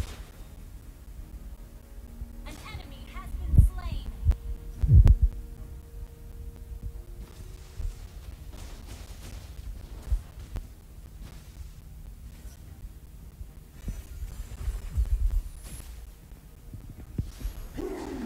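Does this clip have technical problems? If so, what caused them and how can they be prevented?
Yes. Periodic USB or driver dropouts run from 0.06 s to 18.07 s. Every 0.25 s, roughly 10 ms of sound is lost and replaced by silence, about seventy times. A background task briefly stalls the USB bus or audio driver. Each stall leaves a regular tick wherever there is signal. Prevent it by disabling USB power saving and stopping the background task that wakes on that interval.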